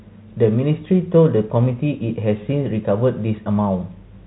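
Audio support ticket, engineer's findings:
No faults found in this speech clip. The G.711 telephone coding path is working as expected, with nothing audible above 3.9 kHz and any codec damage faint at most.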